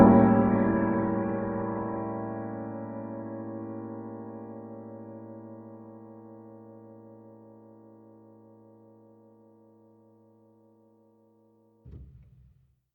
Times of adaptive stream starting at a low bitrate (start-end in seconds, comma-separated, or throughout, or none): 0.00-2.00